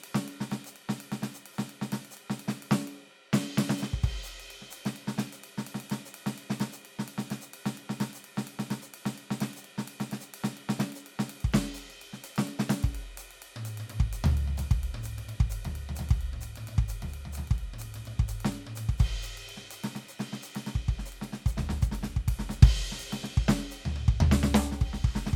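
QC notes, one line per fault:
No problems stood out on listening to this music.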